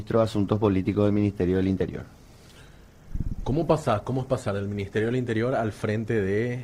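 For the first 5.14 s the audio sounds dull and smeared, with missing or synthetic-sounding treble and stronger codec artefacts, which fits a stream starting near 16 kbit/s Opus. At 5.14 s it jumps abruptly to better quality, consistent with about 64 kbit/s. This is an adaptive stream starting at a low bitrate, where the player upgrades once it has gauged the connection. It differs from a dropout or reconnection because the step happens with no silence or gap, and from a gradual filter sweep because the change is instantaneous.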